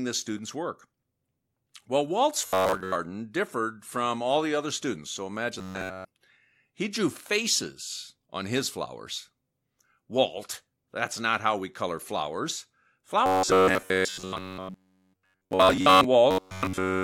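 Audio likely arrived too seldom, so playback looped a buffer of about 10.7 ms, producing robotic sound from repeated short buffers at 2.42–2.95, 5.59–6.07, 13.26–16.05 and 16.31–17.03 s. Speech becomes a rigid metallic buzz near 94 Hz, with most of the sound repeated in the first and third stretches and all of it in the second and fourth.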